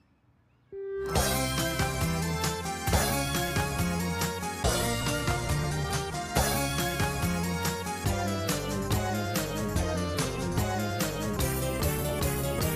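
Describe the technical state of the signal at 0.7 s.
At 0.7 s the signal is intact, with no dropout, distortion, glitch or other technical fault audible at that point.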